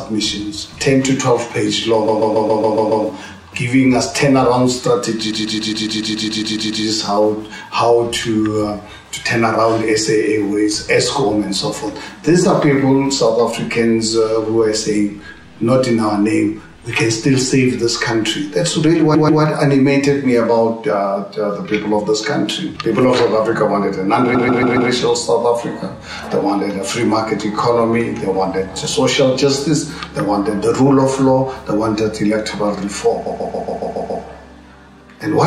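The audio stutters five times, looping a fragment of about 140 ms over and over at 2.07 to 3.04 s, 5.30 to 6.83 s, 19.14 to 19.41 s, 24.34 to 24.89 s and 33.25 to 34.23 s, from two to eleven extra plays each. These are repeated frames: a short run of compressed frames was duplicated, so the decoder replays the same block. Each stutter lengthens the audio by its repeats, up to about 1.5 s at 5.30 s.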